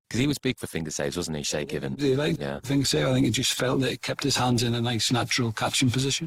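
From the start to 4.77 s the adaptive stream is starting at a low bitrate: the player opened on a lean rendition, which sounds like roughly 24 kbit/s Opus, with dull, smeared treble. At 4.77 s it steps up, the spectrogram's upper bands suddenly fill in, and the waveform shows no gap.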